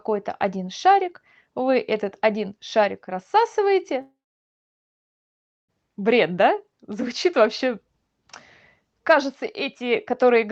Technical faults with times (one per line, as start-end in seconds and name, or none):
4.01-5.70 long network dropout